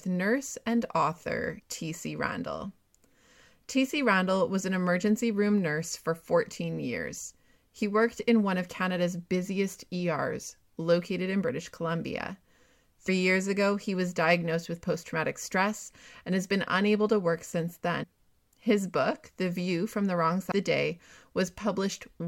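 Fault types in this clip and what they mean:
Damaged data in a compressed stream: corrupted bytes make the decoder lose sync. Four brief glitches result, including one after "nurse and author" and one before "years ago he was".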